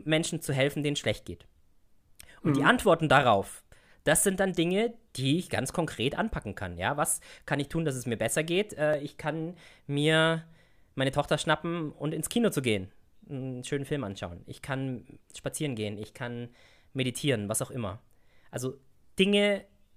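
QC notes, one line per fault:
1.83–18.40 s, clock drift buffer slips: about seven regular clicks, one every 2.37 s, during the speech. Two device clocks likely disagree by around 500 ppm. The buffer drifts until a block of roughly 70 samples is dropped or repeated, causing each click.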